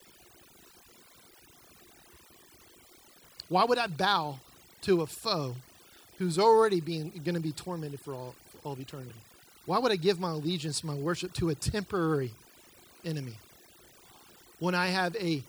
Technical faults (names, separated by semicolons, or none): overdone noise removal